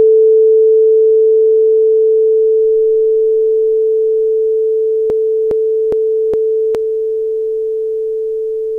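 From 5.1 s to 6.75 s the audio turns into a broken-record loop: a fragment of about 0.41 s plays four times back to back, identical each pass. The likely cause is a player or stream stall that kept re-sending its last buffered piece, so the intended audio for that span is missing.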